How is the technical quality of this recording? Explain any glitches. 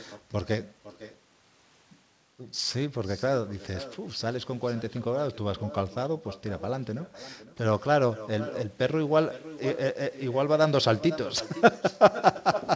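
The recording has one clear glitch, an echo with no canceller, heard on top of call audio that stops around 8 kHz, which fits a G.722 wideband link.

Echo with no canceller: throughout the clip, every phrase is followed about half a second later by a fainter copy, about 15 dB down, sounding thin. The far end played the call over a loudspeaker, its microphone recaptured it, and nothing subtracted that returning signal.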